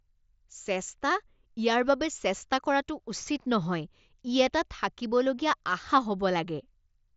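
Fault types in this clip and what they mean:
Nothing here counts as a fault: the speech comes over what sounds like an ordinary wideband Bluetooth mSBC headset link, with the top end stopping around 7.7 kHz as that path normally does.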